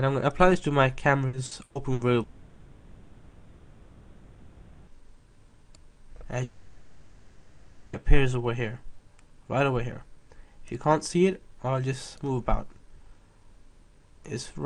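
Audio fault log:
1.27 to 2.02 s, repeated packet loss (robotic sound): four short holes in quick succession, the longest 120 ms, with about 40% of that stretch patched by carrying the last bit of sound forward each time, so it comes out choppy and robotic, with pieces missing.
2.23 to 4.90 s and 6.43 to 7.96 s, long network dropout: both stretches are filled end to end by a drawn-out continuation of the preceding sound, with no true silence, and the audio then resumes without the missing part. A long network dropout is the likely cause.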